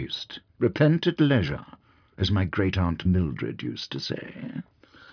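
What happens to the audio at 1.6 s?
Nothing goes wrong at 1.6 s; the audio plays through that moment intact, with no dropout, click, glitch or other fault.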